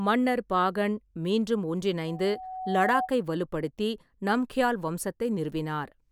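After "மன்னர் பாகன் மீண்டும்", from 2.07 to 3.11 s, there's loudspeaker feedback squeal: the mic catches its own speaker, so a 748 Hz tone swells over roughly a second until it sits above the speech.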